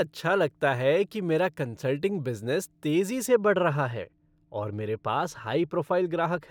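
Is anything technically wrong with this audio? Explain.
Yes. From 3.27 s to the end, right after "मेरा कन्सल्टिंग बिज़नेस तेज़ी", the speech has de-emphasis applied wrongly. A treble cut with no matching boost tilts the top end down about 10 dB at 10 kHz, so it sounds dull and muffled. Unlike a low-pass filter, the roll-off is gradual rather than abrupt.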